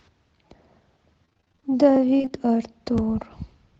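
Repeated packet loss (robotic sound) hits twice, from 1.25 to 1.71 s and again from 2.17 to 2.39 s. In each stretch, packets went missing or arrived late in quick succession. Every hole, none longer than about 29 ms, was covered by stretching out the preceding sound, and the next hole came soon after. Nearly half of each stretch is this patched-in filler, so the speech turns choppy, with fragments dropped out under the call codec's narrowed band.

Overlapping chunks cause a brief stutter at 2.98 s. The audio was handled in blocks that fit a one-second chunk size, and the next block began before the previous one had finished. About 19.5 ms of sound therefore plays twice at the join, heard as a small click or doubled blip.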